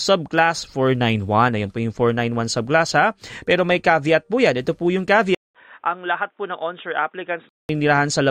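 After "po yung", 200 ms of silence at 5.35 s, then duller sound capped at 3.8 kHz with fresh hiss until 7.69 s: likely an input switched to a poorer device.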